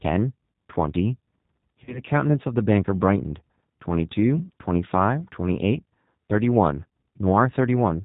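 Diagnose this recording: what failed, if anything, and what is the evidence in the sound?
Codec stage: the whole recording passes through a G.729 codec at 8 kbit/s. Nothing sounds above 4 kHz. The speech is rough and synthetic because the decoder rebuilds it from a filter and sparse pulses.

Network stage: VoIP packet loss concealed by the speech codec occurs at 1.84 s. About 30 ms is missing, which fits one lost packet. The decoder repeats its last pitch and filter as a fading buzzy tone or coloured noise, and the sound stays weak until 2.01 s.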